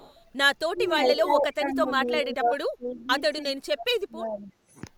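From 0.0 to 0.15 s a faint echo leak is audible: a copy of the speech arriving 328 ms late and about 30 dB down, likely from a loudspeaker-side echo canceller letting its microphone pickup through. On a spectrogram it shows as weak harmonic traces that repeat earlier patterns a third of a second later. The same echo returns at 0.82–1.18 s, about 15 dB down, then at 1.99–2.18 s (about 20 dB down) and 2.91–3.04 s (about 30 dB down).

Speech suppressed in double talk occurs at 0.69–1.01 s, 1.25–2.52 s, 2.77–3.14 s and 3.61–4.52 s. Here the talker dips, thins or breaks up by roughly 15 to 30 dB, with the deepest drop in the last stretch. In the waveform this appears as sudden pinched envelopes, and on a spectrogram as faded or gapped upper bands.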